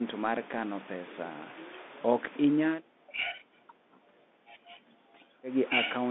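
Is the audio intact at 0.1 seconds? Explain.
No. At 0.1 s the speech is already passing through a Bluetooth CVSD headset codec, and this lasts the whole clip. CVSD codes each sample as a single up-or-down bit, with a step size that adapts. The band runs only from about 200 Hz to 3.6 kHz, which fits a 64 kbps headset link. The damage is plainly audible. Sharp, loud high sounds outrun the step and distort, s sounds turn scratchy, and a granular hiss sits underneath.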